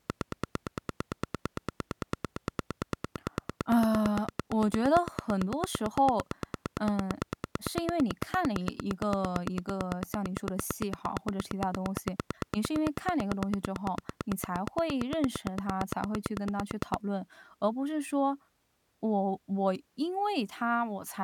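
Something in the chain is likely injecting a steady electrical pulse, such as interference from nearby equipment or a faulty connection or power supply, and it runs from 0.10 s to 16.95 s. The result is a train of clicks: about 150 near-identical pops at a regular 8.85 per second, peaking roughly 15 dB above the speech. They tick through the talking and in the pauses too, then stop.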